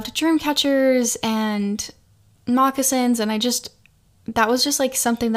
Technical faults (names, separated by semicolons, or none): none